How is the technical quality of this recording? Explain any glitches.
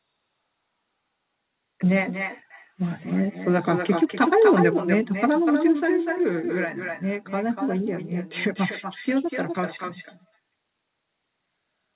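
The recording carries an uncancelled echo for its whole length, heard over a narrowband call path whose audio stops at 4 kHz, which fits G.711 mu-law telephone coding.

Echo with no canceller runs from start to finish. The speech returns about a fifth of a second later, only about 6 dB quieter. The far end's loudspeaker output reaches its microphone and is sent back unremoved, so every syllable is trailed by a thinner duplicate.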